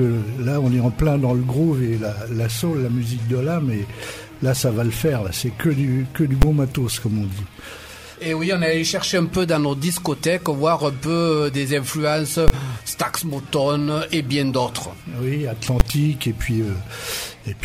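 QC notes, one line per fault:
6.42 s, 12.48–12.50 s, 15.80 s: invalid numbers at full scale. A calculation produced infinite or invalid values, pinning the output flat at one extreme far beyond the audio's peaks for 10 ms, 20 ms and 10 ms blocks. Each block is too short to hear as anything but a single bang.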